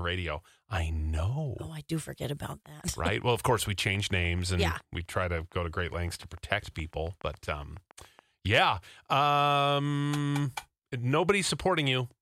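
From 2.52 s, right after "I do forget", a train of clicks runs until 8.2 s, ending just before "yeah um". The clicks arrive at a steady 7.05 per second, about forty in all, each reaching roughly the level of the speech and ticking through the pauses as well. The likely cause is interference from nearby equipment or a faulty connection or power supply. On a spectrogram they show as evenly spaced thin vertical lines, and on the waveform as regular sharp spikes.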